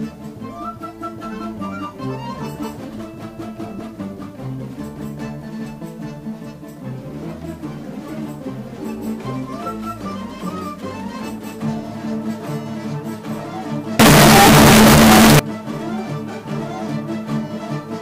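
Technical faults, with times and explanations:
13.99 to 15.39 s, signed and unsigned mixed up: harsh distortion at full loudness, even in quiet parts. Likely the 8-bit samples' top bit flipped, so each zero crossing jumps full range.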